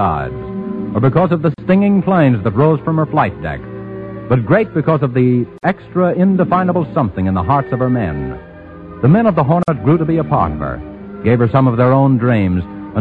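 Throughout, the sound is watery and swirly, with dulled treble and smeared attacks, likely from MP3 compression at a low bitrate around 64 kbps. Short silences cut into continuous sound at 1.54, 5.58 and 9.63 s, lasting about 39, 49 and 49 ms and recurring every 4 s. These are gaps at joins of encoded pieces, where separately encoded chunks kept their start delay and end padding.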